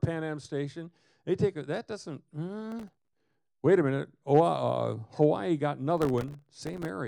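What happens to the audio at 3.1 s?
Processor overload crackle runs from 2.72 to 3.35 s. Very short buffers miss their deadlines repeatedly, each leaving a hard-edged gap of silence, heard as gritty crackle.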